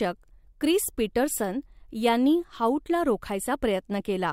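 No technical faults can be heard anywhere in this recording.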